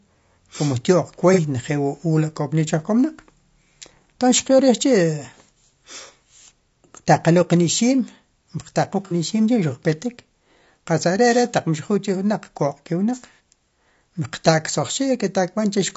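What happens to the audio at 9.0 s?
From 9.05 to 9.14 s there is a brief smeared, noisy patch where the sound loses its definition before recovering. That is AAC frame loss with concealment: about 60 ms of data went missing, which fits two lost frames, and the decoder filled the gap by reusing and scrambling the last good spectrum rather than going silent.

Around it, and across the whole clip, the speech has a rough, grainy texture with noise between the harmonics and a synthetic-sounding top band. That is most likely low-delay AAC compression (AAC-ELD): its short frames resolve pitch harmonics poorly, and the plainly audible damage points to a low bitrate of about 32 kbps.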